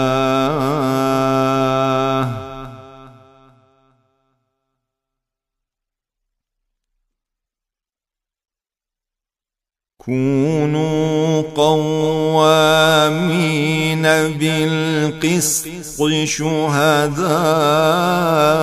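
No technical faults are audible.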